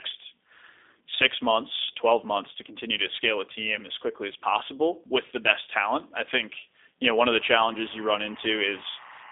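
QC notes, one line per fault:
Throughout, G.729 codec: The whole clip has been through an 8 kbit/s G.729 coder, and the damage is plainly audible. The codec doesn't carry the waveform. It sends a short-term filter shape, a pitch lag and a handful of pulses per frame, and the decoder rebuilds speech from those. That's why it sounds synthetic. The line band sits at roughly 300 Hz to 3.6 kHz, with nothing above 3.8 kHz, so the top end is gone.
7.36 to 9.31 s, timecode bleed: From 7.36 s to the end there's a chirping warble behind the speech, sitting about 20 dB under it. It's linear timecode at 24 frames per second leaking in from a neighbouring track or cable. The code is a square wave that flips between two pitches an octave apart, here around 1 and 2 kHz depending on the bit pattern. That constant switching is what gives the warble.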